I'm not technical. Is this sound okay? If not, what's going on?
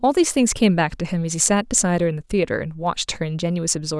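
No, there's a faint, steady ticking running under the speech from about 0.10 to 3.84 s, roughly every 0.15 s. Those are clock slip clicks, likely from two devices keeping slightly different time, so a single sample gets dropped or doubled at each tick.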